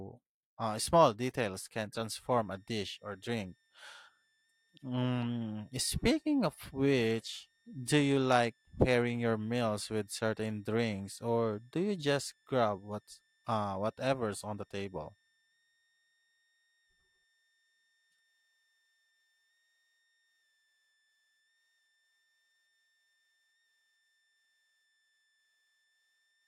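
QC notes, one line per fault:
2.16–26.47 s, switching supply whistle: just after "uh small details can", a faint high whistle near 2 kHz enters and stays to the end, its pitch wandering between about 1.75 and 1.86 kHz, sitting roughly 45 dB under the speech. A power converter running in an audible burst mode, or beating against a second supply, would produce this. The drifting pitch separates it from a fixed test tone or feedback ring, and its high register rules out mains hum.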